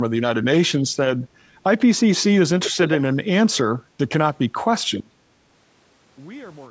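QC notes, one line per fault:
2.63–2.97 s, echo leak: a delayed copy of the speech surfaces about 389 ms behind the original, roughly 10 dB below it, briefly doubling the sound. The likely cause is a loudspeaker on the far end feeding its own microphone, with the echo canceller letting some of that pickup back into the call.
5.00–6.70 s, one channel inverted: the level falls by about 24 dB and the speech drops to a faint remnant through to the end. One stereo channel has likely reversed polarity, so the centred content shared by both channels cancels when they are summed to mono.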